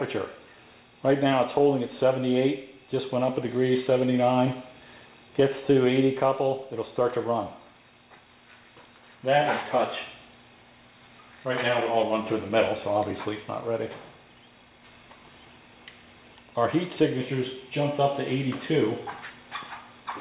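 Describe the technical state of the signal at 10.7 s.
At 10.7 s the signal is intact, with nothing present beyond the narrowband character of the call path, which leaves no content above 4 kHz, as A-law telephone coding at 64 kbps would.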